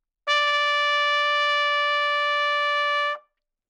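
From the start to 1.96 s the audio rushes ahead at about 1.76 times its normal pace, yet its pitch stays where it belongs, so the passage sounds hurried. At 1.96 s the pace drops back abruptly. This is a time-stretched section, likely squeezed by software to fit a shorter length, which kept the pitch steady by discarding short slices of the sound.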